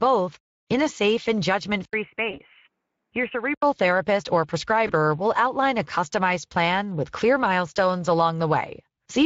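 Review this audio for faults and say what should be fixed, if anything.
Speex codec damage runs through the whole clip. The speech sounds hoarse and noisy throughout. Too few bits reach the excitation, so the decoder rebuilds the voice roughly. The damage fits a bitrate around 20 kbps. To prevent it, use a higher Speex quality setting or a modern codec such as Opus.

From 1.85 to 3.62 s, the sound turns dull and a little quieter, by about 5 dB. Nothing remains above 3 kHz. An 80 ms silence marks the switch. A faint new noise floor sits far below the speech. The likely cause is an input switched to a poorer device. To prevent it, lock the input device so the system cannot change it mid-recording.

VoIP packet loss concealed by the speech codec appears at 2.31–2.40 s and 4.87–4.93 s. Each event fits one lost 20 ms packet. The decoder stretches the last sound into a fading buzzy tone or coloured noise. 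The distortion lasts beyond the gap while the decoder recovers. To prevent it, stabilise the network path and add forward error correction or a jitter buffer.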